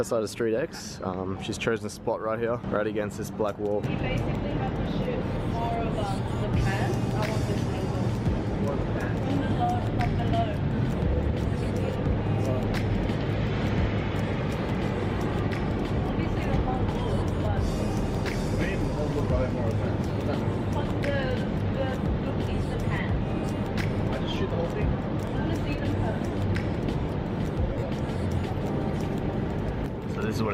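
The audio has two bursts of lost LE Audio frames. The first runs from 0.76 to 0.80 s, a 40 ms gap. The second is scattered across 27.73 to 27.89 s, about 120 ms lost in short runs of around 40 ms. The LC3 decoder fills each gap by repeating the last spectrum with random signs, so the sound smears into noise. The light codec compression is at most faintly audible.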